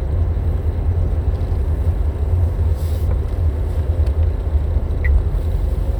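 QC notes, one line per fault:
No faults heard anywhere in this recording.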